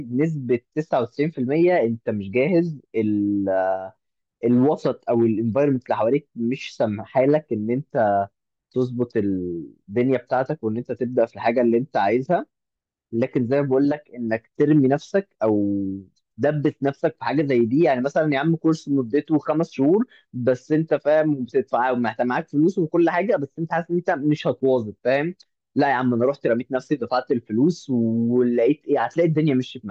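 No technical faults are audible anywhere in this speech recording.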